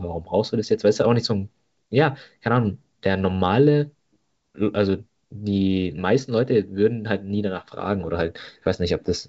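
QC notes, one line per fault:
The speech passes through G.722 wideband telephone coding at 64 kbit/s, which carries the band up to about 7 kHz and leaves at most faint traces of the coding, with no technical faults to log.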